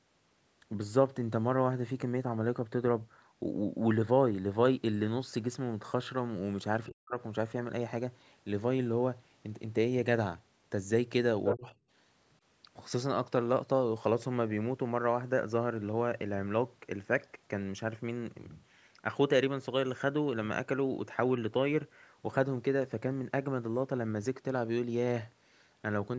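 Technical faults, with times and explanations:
6.87–7.16 s, speech suppressed in double talk: the talker's speech dips hard, by roughly 40 dB, likely because the echo canceller mistook overlapping talk for loudspeaker echo.
11.44–11.53 s, other side's voice leaking through: a brief scrap of a second voice appears, about as loud as the talker, likely loudspeaker playback the echo canceller failed to remove.
11.54–11.73 s, speech suppressed in double talk: right after that scrap, the talker drops by around 30 dB, likely the canceller clamping down on both voices at once.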